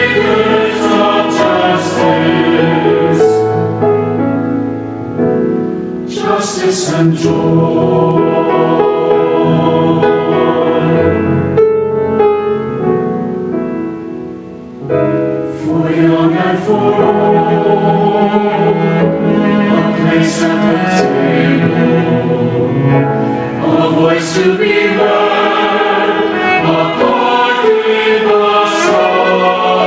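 Throughout the clip, the gain pumps in a breathing, pumping motion with a swing of around 15 dB. Loud and quiet passages sit unnaturally close in level, giving a squashed, crowded feel. This gain pumping is likely caused by the input gain being set far too high, so a fast limiter or compressor clamps down on every loud sound. The call microphone processing is audible as a band limit with nothing above 8 kHz.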